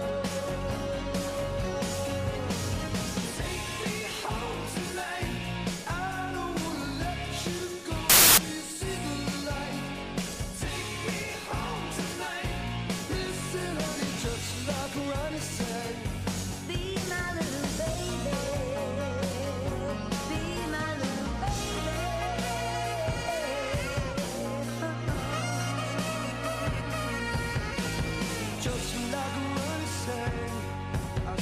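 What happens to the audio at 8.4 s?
Samples built from the wrong bytes, from 8.10 to 8.38 s. Misassembled bytes make noisy low bits dominate, so the sound turns into loud, harsh broadband noise.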